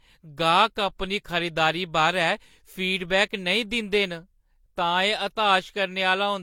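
Throughout the speech, two distinct sets of codec artefacts overlap below an 18.4 kHz ceiling, likely transcoding between lossy codecs, Vorbis then HE-AAC, unlike one codec's uniform signature.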